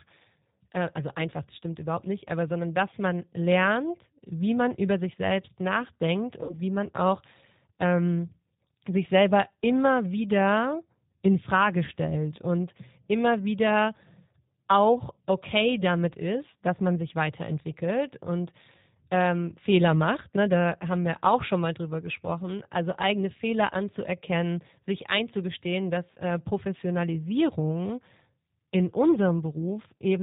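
From the start the whole clip carries G.729 codec damage, and it's plainly audible. The speech sounds slightly rough and synthetic, with nothing above 4 kHz, which fits an 8 kbit/s G.729A stream. The decoder rebuilds each frame from a filter model and a few pulses rather than the actual waveform.

At 6.43 to 6.57 s there's VoIP packet loss concealed by the speech codec. Around 60 ms of audio, fitting three lost packets, gets papered over by stretching the last sound into a fading buzzy tone or coloured noise, and the speech stays weak briefly afterward. The same happens more briefly at 26.14 to 26.18 s, with about one packet's worth missing.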